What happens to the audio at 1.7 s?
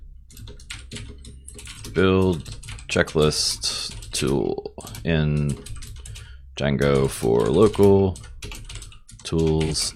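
AAC frame loss with concealment at 1.73–1.77 s: a 43 ms gap, fitting a single lost frame, is filled from the last good spectrum, leaving a brief smeared, phasey patch.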